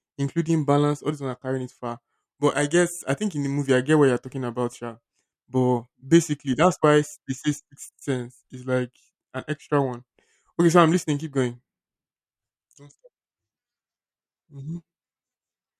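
No dropouts, clipping, glitches or other transmission or recording faults turn up anywhere in the recording.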